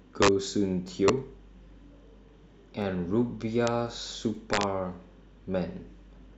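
At 0.22 to 0.28 s the speech hits integer overflow. Peaks drive about 4 dB past the largest value the format can hold. Instead of being limited, they wrap around to the opposite sign. Each one jumps across the full range. The result is a violent crack, far harsher than clipping. At 0.88 s comes a repeated buffer. A tiny slice of audio plays twice, with a hard join. It is heard as a brief click or buzz. The length fits a 10 ms buffer, and nothing seems to be skipped. Integer overflow returns at 1.08 s, just at the limit, about 1 dB over. It gives a sharp snap. Another repeated buffer clicks at 2.82 s. At 3.67 s a peak sits right at the limit, about 0 dB over, and still wraps into a crack. A third repeated buffer falls at 4.35 s. Last, at 4.53 to 4.63 s, overflow runs about 2 dB over. The loud syllables there break into a burst of cracks.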